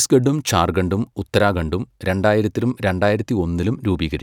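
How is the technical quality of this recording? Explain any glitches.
There's one glitch worth flagging, a channel delay (comb filtering) running from 2.69 s to the end of the speech. One channel lags by about a single sample, and once the two are folded to mono, the first cancellation notch lands up around 20 kHz, shaving off the very top and leaving things a touch dull and airless.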